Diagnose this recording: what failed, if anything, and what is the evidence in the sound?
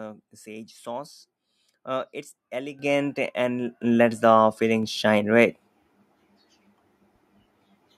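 The failure is in call processing: the microphone volume stepped up three times, at 2.79 s, 3.81 s and 4.83 s, by about 9 dB, 6 dB and 3 dB. The software judged the input too quiet and raised the device's input volume in discrete jumps. Voice and background noise rise together and instantly at each point, and the level never falls back. That sets this apart from a compressor or noise gate, which would pump, release, or act on the voice alone.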